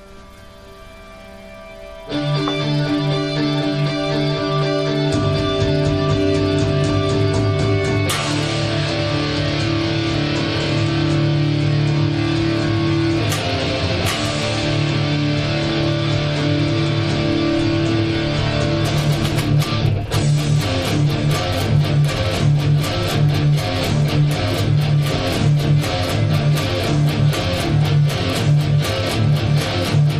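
No technical faults are audible at any point in the recording.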